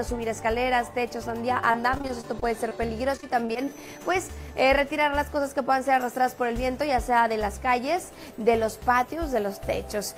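Packets were lost or arrived too late again and again between 1.71 and 3.69 s, a case of repeated packet loss with its robotic sound. The receiver patched each of about fifteen short holes, none longer than 22 ms, by extending the last stretch of audio, so about 14% of that span is concealment. The audio turns choppy, with small pieces missing in quick succession. Overlapping the end of that stretch, from 3.61 to 3.99 s, the jitter buffer ran low and the receiver stretched playback to rebuild its reserve. This jitter buffer slow-down repeated short pitch-period segments to add 59 ms. The audio plays at about 86% speed while keeping its pitch, so sounds are drawn out right as the choppiness ends. Later, from 8.90 to 9.47 s, the opposite happened. The buffer held more audio than its target, and the receiver trimmed short segments, around 40 ms in total, to cut the delay. In this jitter buffer speed-up the audio runs at about 106% speed at unchanged pitch, giving a brief hurried quality.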